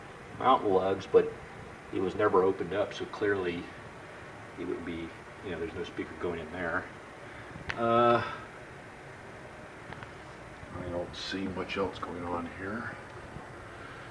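Wrong sample rate from 10.67 s to the end at 14.10 s. Here the samples are clocked out slower than they were captured, with no resampling in between, so timing and pitch shift together. The audio runs at about 0.92 times its proper speed and drops by roughly 1.5 semitones, which fits 24 kHz material being played at 22 kHz. The result is a sudden, slightly sluggish, lowered quality that persists through the final seconds.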